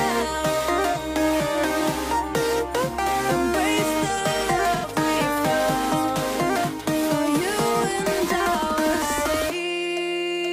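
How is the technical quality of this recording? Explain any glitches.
The recording has two brief dropouts from AAC frame loss with concealment, at 0.91 to 0.97 s and at 4.75 to 4.86 s. Each time, the decoder patched the gap from the last good spectrum with its phase scrambled. The first gap lasts about 43 ms, which fits one lost frame. The second lasts about 85 ms, which fits two. Both come through as short smeared, noisy or phasey patches in place of the real sound.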